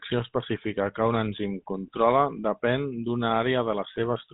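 A buzzy, gravelly roughness sits on the speech from start to finish, and the top end is missing: nothing comes through above about 3.8 kHz, so sibilants sound dull and clipped. This is plainly audible GSM full-rate codec damage, consistent with a 13 kbps telephone link. The codec models the vocal tract and drives it with evenly spaced pulses, keeping only one in three excitation samples. That coarse excitation is what turns the voice rasping and buzzy.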